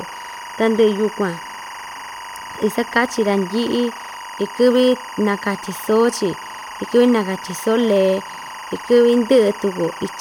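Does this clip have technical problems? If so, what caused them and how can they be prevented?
Yes. Timecode bleed runs through the whole speech clip: a steady chirping warble sits behind the voice, roughly 15 dB below it. Linear timecode is a square wave that flips between two pitches near 1 and 2 kHz as it encodes each bit, and its cadence here matches 23.976 frames per second. It has leaked from a neighbouring track or cable into the audio path. To prevent it, route timecode on shielded, separated cables and keep it off channels adjacent to the audio tracks.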